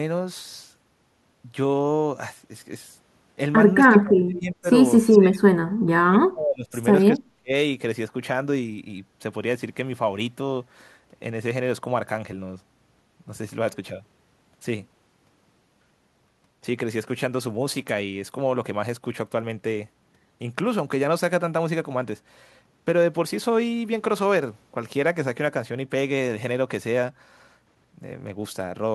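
The speech dips by around 35 dB, close to silence, from 3.87 to 4.68 s, 5.02 to 6.73 s and 7.1 to 7.51 s. This is likely speech suppressed in double talk by an echo canceller.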